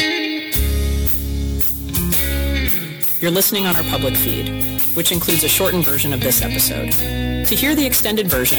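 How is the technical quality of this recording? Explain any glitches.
Hard clipping throughout: the signal is driven about 14 dB beyond what a stage can pass, so roughly 7% of samples are cut flat, adding harsh fuzz on loud moments.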